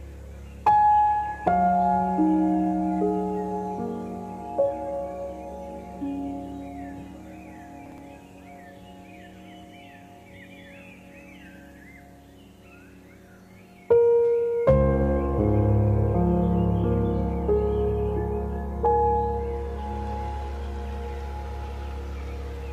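At 7.86 to 7.98 s, chunks out of order: one 60 ms chunk of audio arrived late and was played one chunk behind its proper place, after the chunk that should follow it. Nothing is lost, but the swap creates three hard joins, heard as a brief jumbled stutter.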